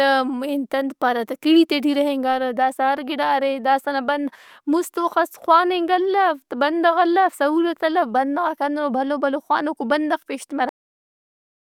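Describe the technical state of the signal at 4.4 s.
At 4.4 s the signal is intact, with no audible fault at that moment.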